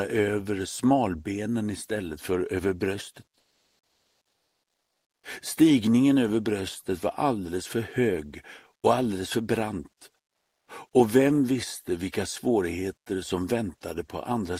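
From 3.43 to 5.23 s, about 1.8 s of the background gives way to comfort noise: a steady, featureless hiss about 11 dB off the original level, likely from Opus discontinuous transmission. Unlike a dropout or noise gate, the pause never goes silent; synthetic noise keeps filling it.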